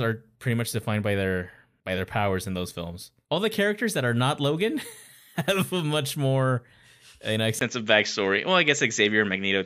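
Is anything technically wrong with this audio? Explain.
Yes. From 7.59 s to the end, the speech turns duller after a 20 ms gap, losing everything above 7.6 kHz, shifting level by roughly 5 dB and gaining a faint new noise floor. That points to a likely input switched to a poorer device, not a simple filter.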